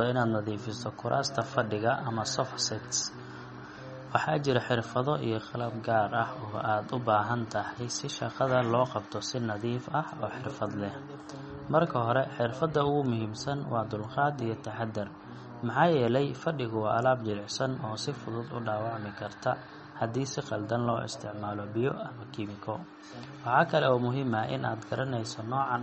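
Throughout the speech, the sound is watery and swirly, with metallic, chirpy s sounds and nothing above 8.4 kHz. This is likely MP3 compression: the encoder cut the treble and zeroed weak frequency lines frame by frame, which fits a bitrate near 33 kbps.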